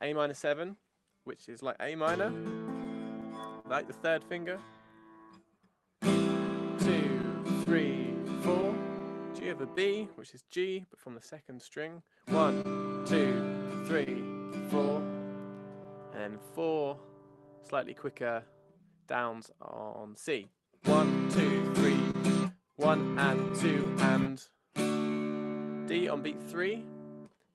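Right from 0.08 s to 27.5 s there's clock drift between sender and receiver: the sender's clock runs about 3% slow, so the receiver's buffer keeps draining. You hear repeated timing corrections, where the receiver stretches the sound by roughly 400 ms overall, playing at about 99% speed with a slightly uneven, dragging tempo. Over that, there are scattered short gaps in clusters at 2.1–3.7 s, 6.5–9.8 s, 11.9–14.1 s, 15.8–18.8 s and 21.3–24.3 s. These are brief lost packets patched by extending the last sound, heard as small smears or ticks no longer than about 50 ms. Through it all there's the usual Opus coding texture, with the top end stopping around 12 kHz.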